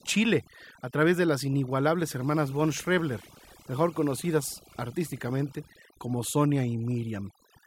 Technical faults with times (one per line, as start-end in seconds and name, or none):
0.00-7.66 overdone noise removal